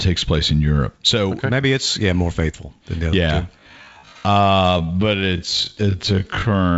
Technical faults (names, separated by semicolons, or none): time-stretched section